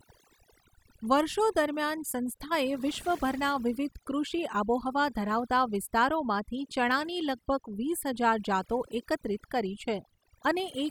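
From start to finish the gaps between phrases fall to near silence sprinkled with twinkling specks. That is overdone noise removal: a noise reduction stage set far too strong clamps individual frequency bands down or off whenever they sit close to its noise estimate. The quieter parts of the voice get caught and removed along with the background noise, and scattered leftover bands flicker in and out as the specks.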